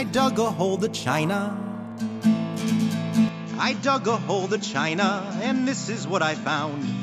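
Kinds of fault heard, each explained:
Input switched to a poorer device: at 3.29 s everything above 7.6 kHz vanishes, level drops about 5 dB and faint new noise appears, likely another mic.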